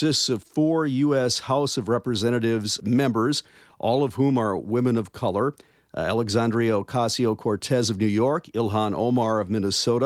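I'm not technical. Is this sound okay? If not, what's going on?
Yes, the recording is in good technical shape, with nothing in the signal that points to a problem.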